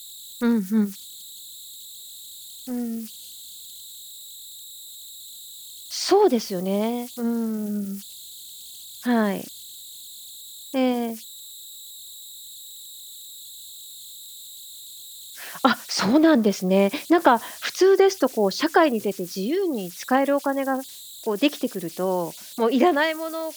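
Throughout the speech, converter idle tones sit about 21 dB below the signal: an undithered delta-sigma converter locks into repeating bit patterns, producing a whistle around 4 kHz in pauses and grain beneath quiet passages. A spectrogram shows a thin horizontal line near 4 kHz.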